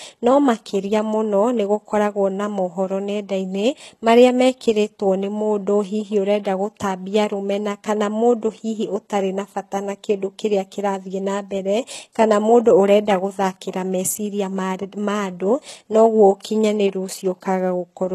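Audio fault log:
Throughout: HE-AAC compression, likely the cause of the gritty, lispy treble in this speech. The lower band sounds coded at a very low rate, roughly consistent with 16 kbps, and the upper band is rebuilt by copying lower bands upward under a coarse envelope, so s sounds turn metallic and harmonics fail to line up across the crossover. On a spectrogram the upper region shows smeared, repeated patches, with a hard ceiling and nothing above 12.3 kHz.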